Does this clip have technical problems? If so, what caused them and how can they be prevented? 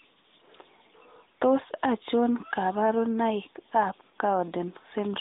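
No, no technical problems here.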